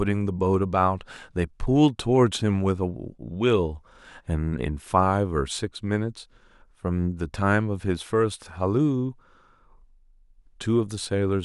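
Nothing stood out as a technical fault on listening to this speech recording.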